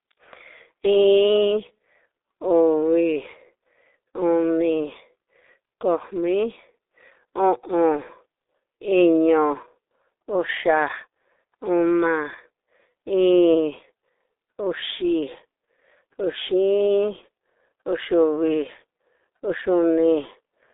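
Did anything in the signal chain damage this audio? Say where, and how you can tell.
Yes. Throughout, the speech is muffled and hoarse, with blurred consonants and nothing above 3.8 kHz. This is heavy G.723.1 codec damage at the codec stage. A telephone band of about 300 Hz to 3.7 kHz and coarse 30 ms frames fit a rate near 6.3 kbit/s.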